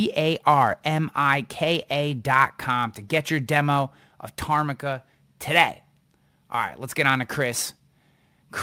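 No technical faults are audible anywhere in the speech recording.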